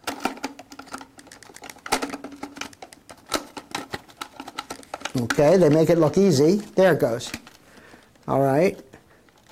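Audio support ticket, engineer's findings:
No faults found on listening; no action required.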